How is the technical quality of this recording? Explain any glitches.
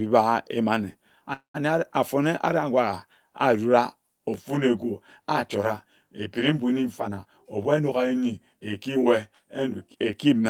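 The recording has three glitches.

At 1.33 to 1.56 s, a call audio freeze fills a gap with fading sound, then 120 ms of silence. Delayed packets likely emptied the jitter buffer.

From 4.34 to 10.13 s, channel delay causes comb filtering. One channel lags about 20 ms, and mono summing notches frequencies evenly from around 30 Hz. The speech sounds rough or slightly doubled.

At 7.00 to 8.97 s, a jitter buffer speed-up trims about a fifth of a second of pitch periods. Speech runs at 110% speed, hurried but unchanged in pitch.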